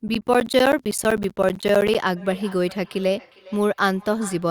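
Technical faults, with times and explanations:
0.08 to 1.95 s, periodic USB or driver dropouts. Short gaps of silence, around 10 ms each, cut into the speech every 64 ms, about thirty in all. Something is briefly stalling the audio path at a fixed rate. Each stall drops samples, heard as regular ticks.
2.17 to 4.50 s, feedback echo between two devices. Each word comes back roughly 0.4 s later, at most about 23 dB below the speech. A second device in the room replays the call into this microphone. Its echo canceller cannot remove that sound.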